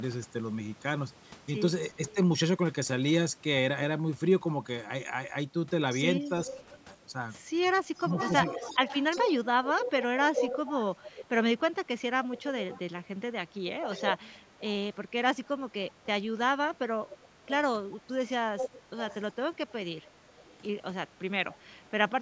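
From 2.09 to 2.15 s there is a faint delayed copy of the speech, 341 ms late. This is likely an echo leak, where a far-end loudspeaker's echo slipped past cancellation. From 6.25 to 21.58 s the same echo returns, nearly as loud as the speech. Within and just after it, the speech drops by roughly 10 to 15 dB in brief pieces at 6.66 to 8.16 s, 15.45 to 15.52 s and 21.17 to 22.1 s. The cause is likely speech suppressed in double talk: the canceller ducked the talker along with the echo.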